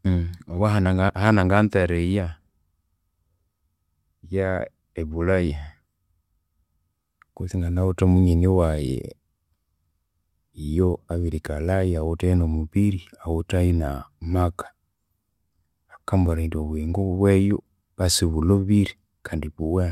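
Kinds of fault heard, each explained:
No faults turn up anywhere in this speech clip, so there's nothing to list here.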